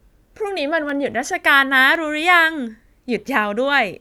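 Dropped samples at 0.89 s and again at 1.95 s in this speech recording: each is a single sharp click, a thin vertical line through the whole spectrum. The likely cause is a tiny fraction of a millisecond of the stream going missing, so the waveform jumps straight from one value to a later one. That gap is far too short to take away any of the speech, but the sudden step is heard as a click.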